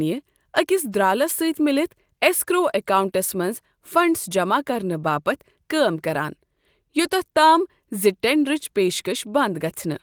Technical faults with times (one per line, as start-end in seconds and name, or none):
none